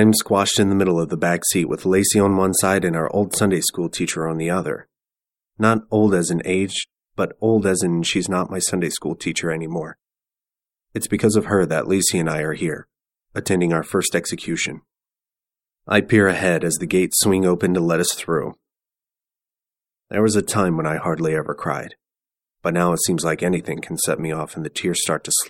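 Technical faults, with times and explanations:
Nothing technical stands out here; no dropouts, glitches or other faults turn up anywhere in the recording.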